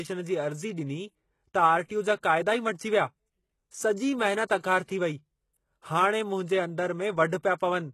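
A speech recording with plainly audible codec damage throughout, most likely from HE-AAC compression at a very low rate, consistent with something around 16 kbps. The band is cut off at 12.3 kHz, and the treble below that cut-off is rebuilt from copies of lower bands instead of being coded directly. The regenerated harmonics don't line up with the real ones, so sibilants come across gritty and metallic rather than clean. Pre-echo is also audible on three attacks in quick succession, at 4.46 to 4.49 s, 4.58 to 4.64 s and 4.84 to 4.88 s. Before each one, a short hiss runs ahead of the onset for 31 ms, 52 ms and 43 ms respectively. This happens because the quantisation noise of each transform block is spread across its whole length, so the silence just before an onset picks up noise meant for the louder part. As a result the attacks themselves sound softened and smeared.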